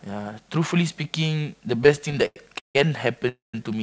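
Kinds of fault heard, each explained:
Repeated stalls (stutter): Between 1.84 and 2.76 s the jitter buffer runs dry 13 times, the longest gap 158 ms. Each gap is filled by continuing the preceding sound, about 348 ms in total, 38% of that span. Nothing is lost, but the audio drags and stutters.
Call audio freeze: At 3.29 to 3.55 s the audio halts for 248 ms, likely because packets were held up in transit. The last sound is extended and fades, with 150 ms of silence, then playback resumes where it stopped, adding delay without losing audio.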